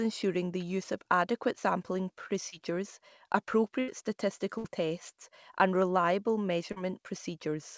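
Speech carried over a call link, with band-limited audio that stops at 8 kHz, which fits a G.722-type wideband codec. There are two brief instances of short concealed packet loss. At 2.50 to 2.54 s, just after "use of adequate sampling", about 20 ms of audio failed to arrive and was patched by extending the preceding sound. This leaves a brief smear before the signal blends back. The same happens at 6.72 to 6.78 s, right after "tests and reliable", where about 40 ms is synthesised and a short wobble is audible. Two longer gaps are a burst of packet loss. At 3.80 to 3.90 s, roughly 80 ms is lost, and at 4.58 to 4.66 s, just before "tests and reliable", about 60 ms is lost. In each, the receiver holds the last sound and fades it, giving a held buzz or decaying hiss, and the speech then resumes with the intervening portion missing.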